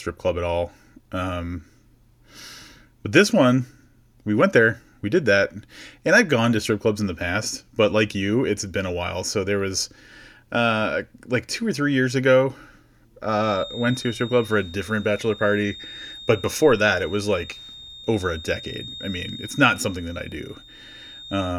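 From 13.33 s until the end of the clip, a thin, steady feedback whistle at 3.7 kHz sits behind the speech, roughly 20 dB below it and swelling and fading slowly in level. The likely cause is a loudspeaker-to-microphone loop held just at the edge of feedback, sustaining one frequency. Unlike a runaway howl, it never builds up, and its slow swelling and fading sets it apart from a fixed electrical interference tone.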